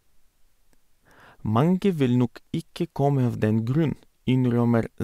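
No technical faults occur at any point in the speech, so there is nothing to describe in time order.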